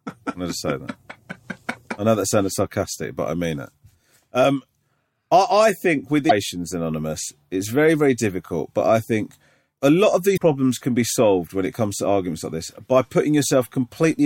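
Damaged data in a compressed stream hits this speech clip at 6.26–6.32 s and 10.33–10.40 s: corrupted frames make the decoder lose sync, producing brief blips.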